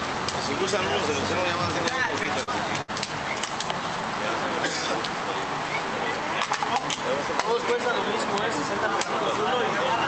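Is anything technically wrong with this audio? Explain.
Yes. From 2.05 to 2.90 s there are repeated stalls (stutter): packets arrived late, so the jitter buffer emptied six times. The receiver stretched the last sound across roughly 149 ms, with the longest gap 69 ms. Nothing is lost, but the audio drags and stutters through the Opus call path.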